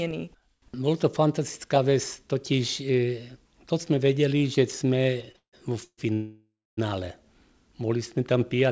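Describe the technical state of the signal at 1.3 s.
At 1.3 s the speech is intact, with no dropout, glitch or distortion, only the band limit of the call path, whose content stops at 8 kHz, which fits a wideband codec such as G.722.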